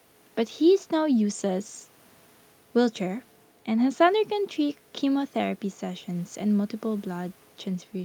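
Nothing in the speech here points to a technical fault, so there's nothing to flag.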